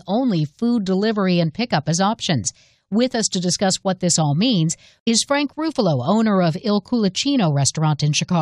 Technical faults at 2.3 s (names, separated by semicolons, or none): none